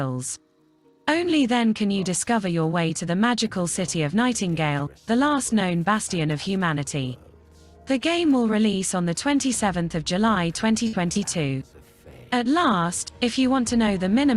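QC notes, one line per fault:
10.87–10.95 s, burst of packet loss: a run of lost or late packets leaves a hole in the stream. The receiver covers about 54 ms by extending the final received sound and fading it down, so it is heard as a held, decaying tail rather than silence. Playback then resumes about 60 ms further on, so that stretch of the original audio is skipped outright.
11.13–11.17 s, short concealed packet loss: a much shorter dropout, with about 20 ms of audio missing at the decoder. Concealment fills roughly 25 ms by continuing the preceding sound and then crossfading back into the real signal. The result is a brief smear or wobble, a quick blur in the sound rather than a clear gap, arriving shortly after the longer burst just before it.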